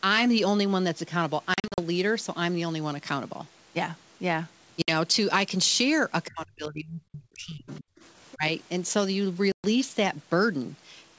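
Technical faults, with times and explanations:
1.54–1.80 s, 4.82–4.91 s and 9.52–9.67 s, packet loss on an ADPCM call: hard-edged silent holes replace lost audio. The first spans about 240 ms with 160 ms missing in short gaps of up to 40 ms, which points to around seven lost packets. The second loses 60 ms, around three packets. The third removes 120 ms, around seven packets. Each time, the receiving decoder's adaptive predictor and step size drift away from the sender's, so the sound resumes slightly distorted before settling.
6.25–6.31 s, 7.69–7.78 s and 8.31–8.36 s, other side's voice leaking through: brief fragments of a second voice appear underneath, at about 20 dB, 30 dB and 25 dB below the main talker. The likely cause is the far end playing through a loudspeaker into the microphone, with the echo canceller leaving residual echo it failed to subtract.
6.29–7.84 s and 8.36–8.44 s, speech suppressed in double talk: the main talker's level is turned down. 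In the first stretch it falls by up to about 35 dB across roughly 1.5 s. In the second it falls by about 15 dB for around 70 ms. This is likely the echo canceller misjudging simultaneous talk as echo and attenuating everything, the wanted talker included, until the overlap ends.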